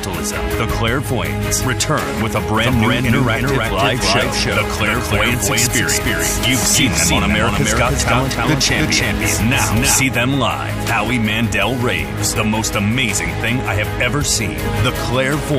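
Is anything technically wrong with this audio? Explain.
Yes. A doubled audio track runs from 2.58 to 10.02 s: an equally loud, dry copy lags about 300 ms, likely from a slower second capture path.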